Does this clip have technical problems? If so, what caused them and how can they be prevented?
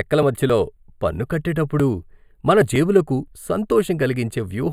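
Yes. Channel delay (comb filtering) runs through the whole speech clip. One channel arrives roughly a tenth of a millisecond late, a few samples, and summing to mono cancels the shared content at evenly spaced frequencies, the first around 5 kHz, giving a dull, hollow top. Unlike a low-pass filter, the notches are narrow and some treble survives above them; unlike a phaser, they stay fixed. Align channels sample-accurately before any mono fold-down.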